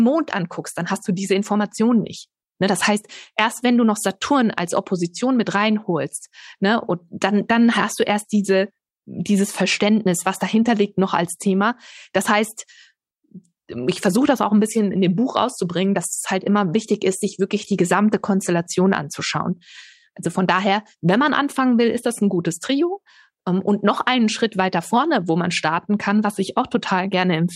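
No faults detected anywhere in the speech recording; nothing to report.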